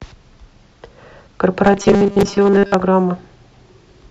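From 1.65 s to 2.74 s the speech takes on a robotic sound from repeated short buffers. The voice goes rigid and metallic, with a steady 200 Hz buzz riding under it, following the original only roughly. That buzz points to a 5 ms chunk being looped over and over, likely because fresh audio wasn't arriving fast enough, so the player kept replaying the last bit and skipped most of the real material.

Right in the middle of that stretch, at 2.21 s, there's a gap between stream segments: a tiny hard-edged dropout of silence, about 4.7 ms of added time. It sits where two segments meet, with timestamps that didn't quite line up, and its position fits 2-second segments. The player simply filled the hole with nothing, so no audio goes missing, just a brief click-like break.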